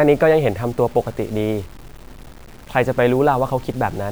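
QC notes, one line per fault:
Throughout: low bit depth without dither. The speech carries a grainy, rasping distortion that rises and falls with the sound, sitting around 30 dB below it and fitting roughly 7-bit resolution. The likely cause is truncation to a few steps with no dither, so the error tracks the waveform. Unlike steady hiss from dithered quantisation or a noise floor, it follows the signal rather than sitting at a fixed level.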